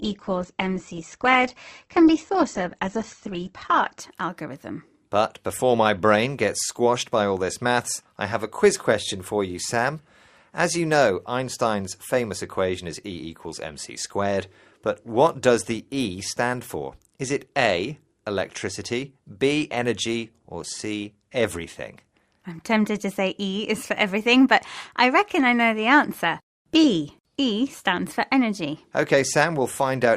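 Speech opens in thin, smeared quality: from 0.0 to 4.0 s nothing sits above about 8.1 kHz and codec artefacts are heavy, which fits a very low Opus bitrate of around 12 kbit/s. At 4.0 s the full treble returns at once, with no gap, consistent with a step up to roughly 64 kbit/s. This is an adaptive stream starting at a low bitrate. Unlike a band-limited recording, the dullness ends abruptly at the start instead of persisting throughout.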